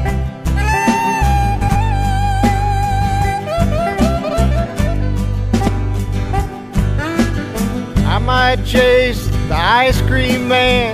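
Frames out of order garble the audio at 1.61–1.76 s, 4.23–4.34 s and 5.53–5.69 s: two adjacent blocks (70 ms, then 46 ms, then 70 ms) play swapped, giving a fluttery stutter. Unlike a dropout or skip, no time goes missing.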